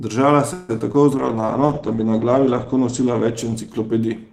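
At 0.53 s the speech stalls and the last sound is drawn out as a fading buzz for about 154 ms, until 0.71 s, with no silent stretch. Then the speech carries on from where it stopped. This is a call audio freeze, likely caused by packets arriving late and the jitter buffer running dry. Nothing is lost. The gap is inserted, so everything after it is pushed back by about 154 ms. That sets it apart from concealed loss, where audio is replaced rather than delayed.

Two short concealed packet losses follow, at 0.79 to 0.82 s and 0.92 to 0.96 s. In each, 20 ms of the call never reached the decoder, and the receiver covers the hole by extending the preceding sound before blending back. They are heard as brief smears or wobbles. Unlike the freeze, the timing does not shift, because the missing audio is overwritten in place and nothing is pushed later.

From 1.12 s to the end comes a call bitrate drop. 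The encoder falls from 48 to 11 kbps, and the audio bandwidth narrows from 20 kHz to 8 kHz. The lowest rate holds for about 1.47 s. The speech turns muffled and rough. That dulling, with no gaps or smears, is what marks it out from the packet-level faults before it.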